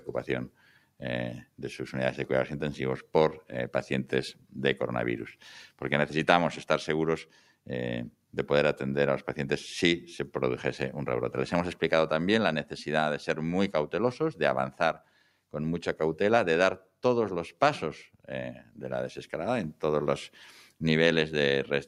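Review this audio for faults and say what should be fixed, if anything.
The whole clip has a noise suppressor applied to music or sounds. A speech-tuned suppressor is reading sustained, steady material as noise and pulling it down, so the level keeps breathing by roughly 5 dB. Onsets mostly punch through, but anything held or decaying gets pushed under, which gives the track a pumping, hollow feel that never really settles. Switch the suppressor off, or use a music mode, for non-speech material.

There are five clear spots of sound cut by the noise suppressor: 0.49–1.01 s, 4.34–4.55 s, 7.25–7.67 s, 14.71–15.53 s and 18.54–18.81 s. In each one the suppressor clamps down harder than usual, by about 11 to 12 dB at the deepest point. Sustained or fading parts sink and their tails get chopped short, while anything sudden mostly survives. The longest one is around 14.7–15.5 s. Fix it at the source by bypassing noise suppression on this path.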